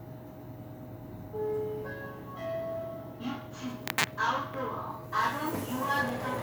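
No technical faults are audible.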